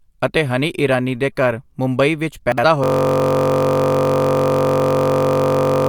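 At 2.52 to 2.64 s, chunks out of order: one 60 ms block plays a chunk late. It is heard as a jumbled moment.

From 2.84 s to the end, a system hang loop. One 21.33 ms slice repeats well over a hundred times, a buzz at 46.9 Hz, fitting a 1024-sample buffer.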